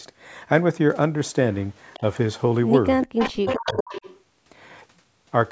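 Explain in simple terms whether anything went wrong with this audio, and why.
Yes, three things went wrong, all tied to one side of the call playing through a loudspeaker.

Echo leak: that side's echo canceller likely failed to remove everything its microphone picked up from the loudspeaker, so it was sent back. A faint delayed copy of the speech, about 0.4 seconds behind, slips through briefly at 1.93 s, then returns much louder from 3.03 to 4.21 s.

Background gated by the echo canceller: while the loudspeaker was playing, the canceller clamped the microphone down hard. From 3.07 to 3.13 s the room sound briefly vanishes to near silence, then comes back when the canceller lets go.

Speech suppressed in double talk: with both sides talking at once, the canceller likely couldn't separate the local talker from the loudspeaker echo and turned everything down. Between 3.41 and 3.92 s, the talker's speech drops out sharply in pieces.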